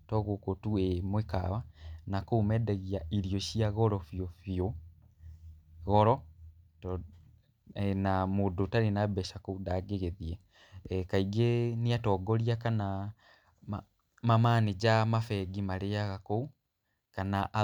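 No technical faults can be heard anywhere in this speech recording. Nothing in the audio stands out as a fault at any point in the clip.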